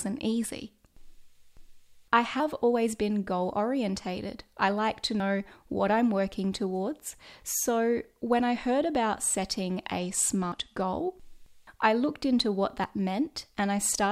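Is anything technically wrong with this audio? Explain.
Yes, there are two faults in this speech clip.

At 5.2 s, right after "orientated I like to" and before "what I'm working towards", the audio jumps forward with no gap. About 40 ms of sound is simply missing. The likely cause is a dropped buffer (overrun): the software failed to read its samples in time, the hardware overwrote them, and the surrounding audio was spliced together. Unlike a dropout, nothing goes silent. The sound skips.

From 9.98 to 10.86 s, starting just after "I heard about setting", the speech turns dull and gritty, then clears again. This is a Bluetooth SBC bit pool drop. On a congested link the encoder cut its bit budget, which fits a bit pool falling from 28 to 13, around 102 kbps. The highest sub-bands got almost no bits and the remaining ones were coarsely quantised. A plain low-pass filter would only remove treble. 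Here the treble loss comes with added grainy distortion, and both disappear once the rate recovers.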